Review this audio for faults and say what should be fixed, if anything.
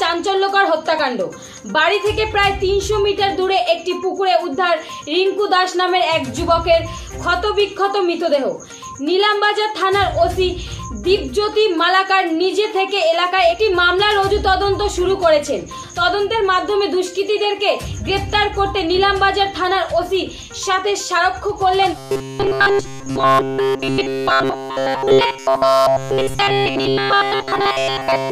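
From 21.98 s to the end at 28.31 s, the sound becomes a rigid, metallic robotic buzz fixed at 134 Hz. This is likely from repeated short buffers: essentially all audio is replaced by looped 7.5 ms fragments. Unlike clipping distortion, the buzz stays at a fixed rate set by the buffer length. Prevent it by giving the audio stream enough buffering and scheduling priority so new data always arrives in time.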